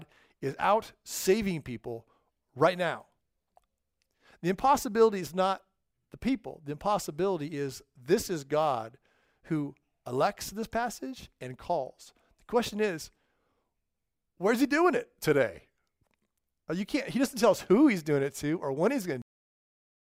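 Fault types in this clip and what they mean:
Cut-off end: the final buffers never made it out, so the speech stops dead mid-sound at 19.22 s and drops straight to digital silence, no decay at all.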